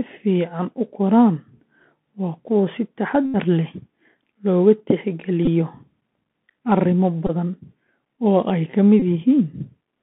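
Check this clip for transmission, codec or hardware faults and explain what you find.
Two faults are present in the speech: a narrowband Bluetooth headset codec coloring the whole clip, and four short bursts where headset packets were repeated.

Bluetooth CVSD headset codec, throughout. The sound points to a CVSD link at 64 kbps. It sends one bit per sample, signalling only whether the waveform rises or falls, with an adaptive step size. The band sits between about 150 Hz and 3.5 kHz, so everything above is gone. Fast, loud high-frequency content outruns the step and distorts. The sibilants come through scratchy, and a grainy hiss sits under the speech.

Bluetooth headset packet repeated, at 3.26 to 3.36 s, 5.45 to 5.48 s, 7.27 to 7.31 s and 9.00 to 9.02 s. Packets were lost between headset and phone, and the chip decoded the previous packet's bits again instead of leaving silence. Repeating a 3.75 ms slice turns each run into a steady buzz near 267 Hz until good packets resume. 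The first run is the longest, covering about 82.5 ms of lost audio, which fits around 22 packets. The other three cover roughly 19 to 23 ms each and are brief buzzy blips.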